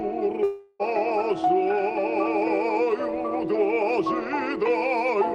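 From 0.43 to 0.82 s the audio is interrupted by what sounds like a long network dropout. For about 360 ms nothing new comes through, and the sound just before the gap is stretched into a decaying buzz that fills the whole hole without falling to silence. That stretch of material is gone, because the audio picks up later rather than where it stopped, so this is likely lost packets concealed by the receiver, not a brief glitch or a plain mute.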